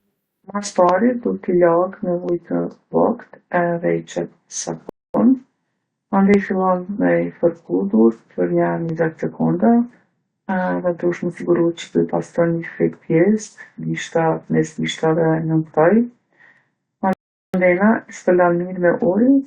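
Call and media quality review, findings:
Dropped samples: single sharp clicks at 0.89, 2.29, 6.34 (just before "fillon me"), 8.89 and 16.57 s. Each is a sub-millisecond discontinuity where the waveform jumps forward. Likely cause is a capture or resampling buffer skipping a few samples. No audible gap or lost syllable, which distinguishes these clicks from packet loss or a stall.

Rebuffering stall: playback freezes to silence at 4.89 s for 0.25 s and at 17.13 s for 0.41 s, then resumes exactly where it stopped. Client playout buffer underrun while waiting on the network. Nothing is skipped and the timeline lengthens, unlike a dropout or concealment gap, which removes sound.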